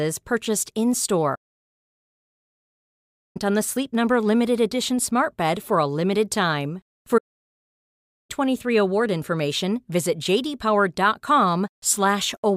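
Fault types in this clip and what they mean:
Playback stall: the speech stops dead mid-flow and the output goes fully silent, for 2.0 s from 1.35 s until just before "on the", then for 1.1 s from 7.17 s, after "for a limited time" and before "award information visit". The likely cause is the player running out of data or its thread blocking. Unlike a brief dropout, these silences last over a second.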